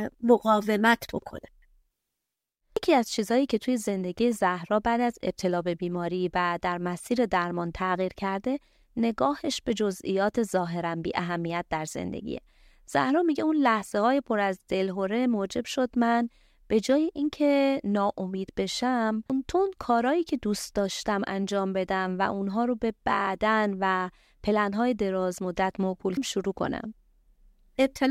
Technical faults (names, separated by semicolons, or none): damaged data in a compressed stream